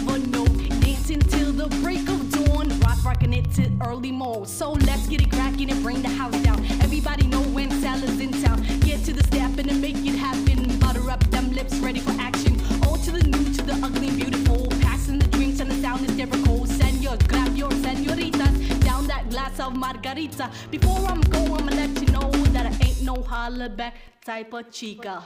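A background process is stalling the USB bus or audio driver at a steady interval, producing periodic USB or driver dropouts from 0.15 s to 25.16 s. Every 0.1 s a sliver of audio, only a tiny fraction of a millisecond, is lost and replaced with silence, a few hundred gaps in all. The result is a fast, even ticking at ten clicks per second, riding on the signal and audible only where sound is present.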